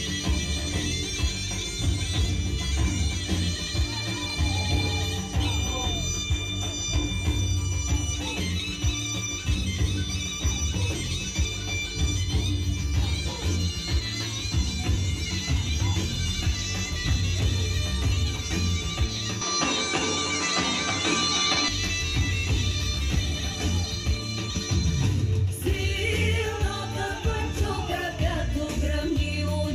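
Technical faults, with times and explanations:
19.41 to 21.68 s, input switched to a poorer device: The sound abruptly loses everything above 10.5 kHz, then returns to full band. There is no gap and little level change. A faint new noise floor, far below the signal, appears. A mid-recording microphone change is the likely cause.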